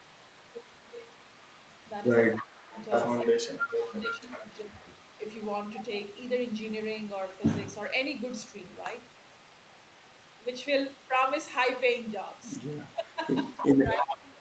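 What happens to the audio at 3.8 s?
At 3.8 s the speech carries an echo leak, running from 0.00 to 7.27 s. A faint copy trails the talker by 295 ms, about 20 dB below the direct speech. The likely cause is a loudspeaker-side echo canceller letting residual pickup through and sending it back.

The same moment falls inside a stretch of speech suppressed in double talk, from 2.38 to 5.21 s. The voice drops in level by up to roughly 15 dB in pieces totalling about a second. The likely cause is the canceller mistaking overlapping talk for echo and attenuating both.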